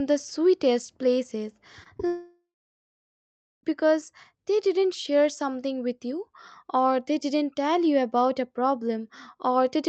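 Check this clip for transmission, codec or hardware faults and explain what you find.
The clip has two kinds of network fault in its first four seconds, after "the sweetest places" and before "because they didn't share".

Short concealed packet loss occurs twice, at 1.83 to 1.87 s and 1.97 to 2.01 s. Each time about 20 ms of audio arrived too late for the decoder, which extended the preceding sound and crossfaded back. Each event is heard as a brief smear or wobble.

A long network dropout follows from 2.07 to 3.65 s. About 1.56 s of audio never arrived, likely because the connection stalled. The decoder stretched the last sound into a fading buzz or hiss, leaving roughly 1.2 s of near-silence before the audio resumes at "because they didn't share", with the missing section gone.

Both faults come through a call-codec path whose high end stops around 8 kHz.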